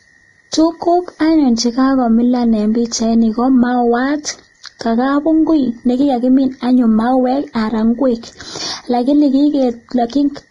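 From start to finish the speech carries channel delay (comb filtering). One channel runs roughly 0.2 ms behind the other, and when the two are summed to mono, the shared content cancels at evenly spaced frequencies, the first notch sitting around 3 kHz. The result is a hollow, phasey colouring of the upper mids. On a spectrogram this shows as fixed dark horizontal bands that stay put regardless of what is said.

Also present throughout is heavy codec damage, likely from Vorbis compression at a low bitrate in the region of 27 kbps. Nothing survives above 10.6 kHz, so the spectrogram ends in a flat ceiling there. Below that, the treble is quantised so coarsely that fine detail turns into noise of similar energy. The speech sounds hissy and grainy, with smeared consonant onsets, and the upper bands look blotchy and speckled rather than cleanly textured.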